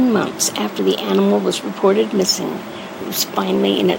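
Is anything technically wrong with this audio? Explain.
No, nothing technically wrong can be heard in this speech recording; the signal stays intact and steady throughout.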